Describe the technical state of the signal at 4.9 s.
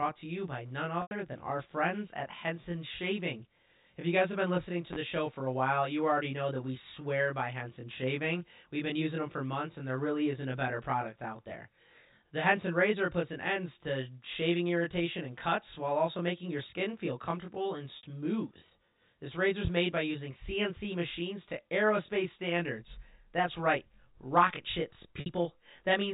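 A loud pop lands at 4.93 to 4.96 s: a single sharp transient peaking about 10 dB above the speech, with the talk continuing underneath. It is likely a sudden voltage step, from a switch, plug contact or driver glitch, added on top of the signal.

Channel delay (comb filtering) runs through this moment and the whole clip. One channel lags the other by roughly 20 ms before the two are summed, so shared content cancels at regularly spaced frequencies starting near 20 Hz, giving a rough, slightly doubled sound.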